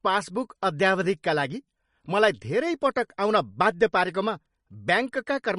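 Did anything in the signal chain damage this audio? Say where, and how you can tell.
Yes, at the codec stage: the whole speech clip shows the marks of low-bitrate MP3 compression, most likely from an encode starved of bits, which fits a rate around 40 kbps. The encoder has dropped everything above 10.5 kHz, so the treble stops at a hard ceiling, and weak frequency lines flicker in and out between frames, leaving a watery, swirling texture, chirpy sibilants and softened consonant attacks from start to finish.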